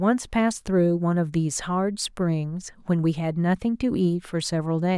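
No technical faults can be heard anywhere in the recording; the signal stays continuous and steady throughout.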